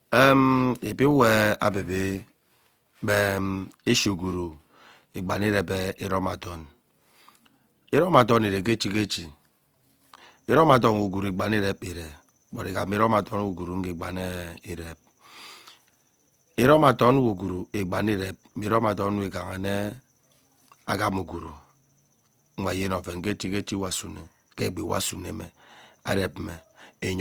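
A speech recording with plainly audible codec damage throughout: the voice sounds grainy and rough, with noisy texture where clean tone should be, though content extends to about 20.4 kHz. This likely comes from Opus compression in music mode, consistent with roughly 24 kbps.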